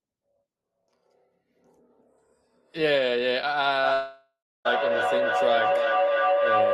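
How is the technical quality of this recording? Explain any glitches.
The recording breaks down in its second half with two serious faults.

From 3.83 s to the end, feedback howl: two devices in one room form a gaining loop, building a tone near 500 Hz that pulses about every 0.3 s and rises about 2 dB above the speech.

From 3.93 s to 4.67 s, a long network dropout likely stopped audio arriving. The receiver extended the last sound as a fading buzz, then left about 0.31 s of silence before speech resumed with that portion missing.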